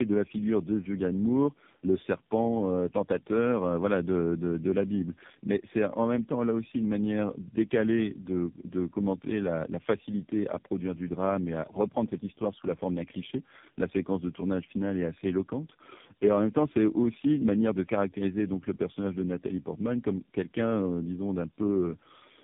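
Tandem speech coding runs throughout: the speech appears to have been decoded and re-encoded by about three low-rate speech codecs in turn, each compressing the previous one's errors, so it sounds rough, muffled and warbly, with nothing above 3.7 kHz.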